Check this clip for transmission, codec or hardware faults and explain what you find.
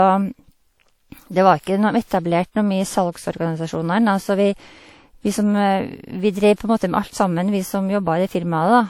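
One codec fault runs through the whole speech clip. Low-bitrate audio saved at a high bitrate: the sound keeps the smeared, swirly artefacts typical of a low-bitrate encode, which fits a roughly 48 kbit/s WMA pass, likely re-encoded to 192 kbit/s MP3. The spectrogram shows no energy above 19.9 kHz.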